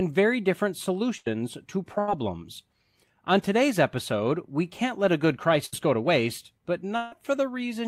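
A burst of packet loss occurs at 1.17 to 1.28 s, just after "very different", and again at 5.66 to 5.74 s, between "can't let a good" and "go to waste but". Each time a short run of audio never arrived. The receiver stretched the last sound for about 84 ms and 66 ms respectively, fading it as a brief buzz or hiss, then resumed with roughly 80 ms and 60 ms missing.

A long network dropout is the likely cause of the gap at 6.96 to 7.14 s, after "go to waste but". The last sound is held and fades for about 155 ms. Audio then returns directly, with no stretch of silence, and about 160 ms of the original is gone.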